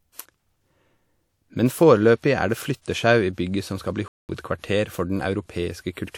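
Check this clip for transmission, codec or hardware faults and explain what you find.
Two faults are audible in this speech clip, one from the codec and one from playback.

From 2.82 to 2.86 s, right after "foreløpig er det", there is pre-echo. The transform codec's quantisation noise, sized for a sharp attack late in its block, spills about 40 ms ahead of it, giving a brief hiss before the onset and a smeared attack.

At 4.08 s, after "som skal bli", a playback stall cuts the output to silence for about 209 ms before the sound resumes at 4.29 s. This gap is likely the player running short of data or its output thread being blocked until it recovered.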